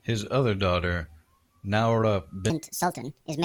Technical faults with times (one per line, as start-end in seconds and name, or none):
2.50-3.44 section at the wrong speed